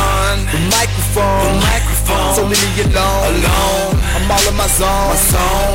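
Hard clipping runs throughout, with the level driven about 17 dB past what the stage can pass, flattening roughly a third of samples into harsh, fuzzy distortion on every loud passage.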